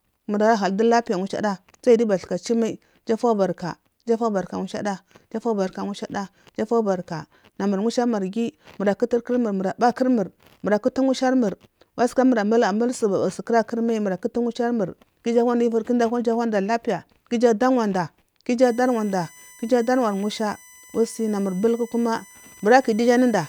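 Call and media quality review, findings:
USB whine, 18.63 s to end of clip (23.49 s). Fixed-pitch tone on a 1 kHz harmonic series, strongest at 6 kHz, roughly 25 dB under the speech. USB device power/ground: 1 ms bus frame current draw coupling into the analog path.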